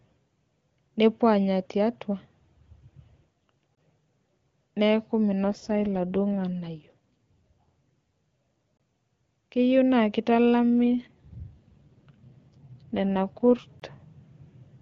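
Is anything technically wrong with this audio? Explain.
Yes. Gaps between chunks appear at 3.75–3.77 s, 8.77–8.80 s and 13.80–13.82 s. Audio delivered in 5-second chunks leaves a hole of about 23 ms at each join. AMR rate drops occur at 5.44–6.95 s and 11.0–13.67 s. A weak link forces the AMR wideband codec into a lower mode, which fits a fall from 23.85 to 8.85 kbit/s, so the speech turns rough and synthetic with no gap or band loss.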